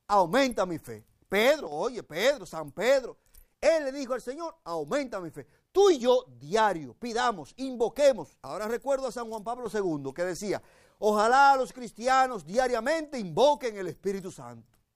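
At 1.67 to 1.72 s there's a brief dip of about 6 dB, and a longer one from 8.47 to 9.66 s, about 1.2 s, at the same depth. Each starts and stops abruptly rather than fading. That's most likely one channel drops out: one side of the stereo pair goes silent, so after the mono fold-down anything common to both sides loses half its level, and anything only on that side vanishes.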